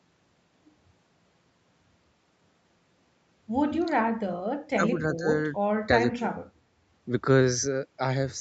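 At 4.06, 4.76, 5.16, 6.17 and 6.54 s the speech briefly drops by roughly 10 to 25 dB for a tenth to a fifth of a second. This is likely speech suppressed in double talk, where the echo canceller turns down the talker along with the loudspeaker echo.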